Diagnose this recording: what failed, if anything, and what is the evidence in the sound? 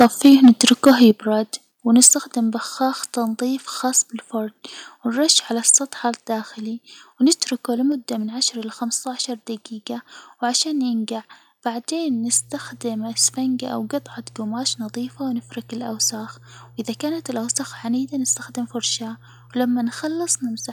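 Microphone overload at the analogue input and converter: the loudest passages between 0.0 and 1.08 s have a harsh, crackling edge, with peaks driven about 9 dB past full scale. Shorter bursts follow at 2.02–2.09 s, about 7 dB over with a large share of samples flattened, and at 5.69–5.76 s, about 2 dB over. The likely cause is excessive input gain. The waveform tops are sheared off at the converter's limit, adding dense harmonic distortion.

Microphone volume stepped down in call processing: the whole signal, voice and background together, drops abruptly in level at 0.04 s by about 2 dB, at 1.11 s by about 7 dB, and at 2.13 s by about 4 dB. This likely comes from the call software's automatic gain control detecting clipping and lowering the device input volume in single discrete steps rather than smoothly.

Mains hum in the analogue wiring: from 12.1 s onward a steady low 60 Hz tone sits under the audio at about 20 dB below the signal and persists through pauses. 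Power-line current is coupling into the signal path, typically through a ground loop between devices or induction from a nearby transformer, so the interference rides on the analogue chain before conversion.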